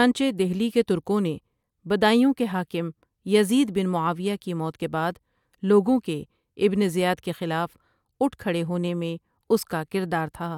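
Nothing here stands out as a technical fault; the speech runs along without any glitch, dropout or damage worth pointing to.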